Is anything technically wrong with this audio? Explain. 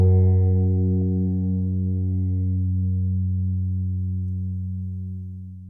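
No, nothing in the signal points to a technical fault.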